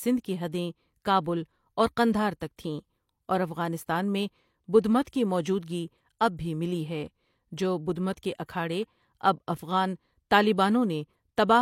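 Pre-echo at about 5.04 s in this speech recording: a transform codec spread quantisation noise across its block, so a short hiss of roughly 19 ms precedes a sharp attack, softening it.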